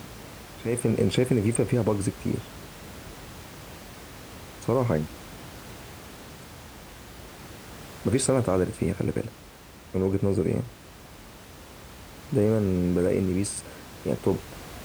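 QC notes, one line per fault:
Nothing stood out on listening to this speech clip, with only the room's own background noise sitting about 19 dB below the speech.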